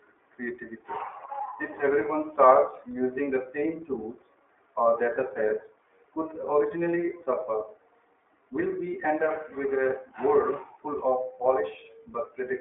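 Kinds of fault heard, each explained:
iLBC codec: the speech is squeezed into a telephone band of roughly 300 Hz to 3.5 kHz, and each short frame is coded on its own, leaving a plainly audible rough, synthetic grain that fits iLBC's 15.2 kbps mode with 20 ms frames.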